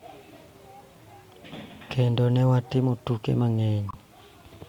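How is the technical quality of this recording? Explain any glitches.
The recording has one glitch, a brief decoding error near the end.

Corrupt frame decoded, 3.89 to 3.95 s, just after "ne watimo tuke": damaged bits in a few consecutive compressed frames were decoded and played anyway. Misread gain values and spectral codes pushed energy into frequencies that don't belong to the speech for roughly 60 ms. It comes through as a short chirp, squeak, blip or burst of noise, peaking at about -25 dBFS.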